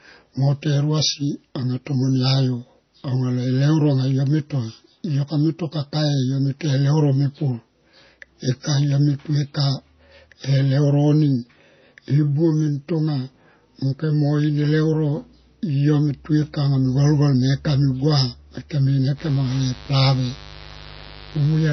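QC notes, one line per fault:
Throughout: low-bitrate audio saved at a high bitrate. Nothing sits above 6.1 kHz, so the speech has a dull, boxed-in top end, with the smeared, swirly artefacts of heavy MP3 coding. A generous modern encoding would keep far more treble, so this is likely a coarse MP3 of roughly 24 kbit/s later re-saved at around 192 kbit/s. The larger second file cannot restore the detail the first pass discarded, and adds almost nothing of its own.
19.16 to 21.72 s: mains buzz. A steady, raspy buzz enters and runs to the end, about 20 dB below the speech. It is built on 50 Hz, with switching spikes twice per mains cycle spraying harmonics up into the kilohertz range, which gives the edge its rasp rather than a smooth hum. That pattern fits interference from a dimmer, a rectifier or an unshielded cable getting into the signal path.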